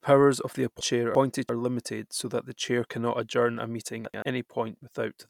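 Between 0.81 and 1.49 s, after "of the" and before "limited so that the", two neighbouring runs of frames play in swapped order, each about 341 ms. The speech flutters. A shorter swap of two 85 ms runs follows "cannot adjourn a meeting", from 4.05 to 4.22 s.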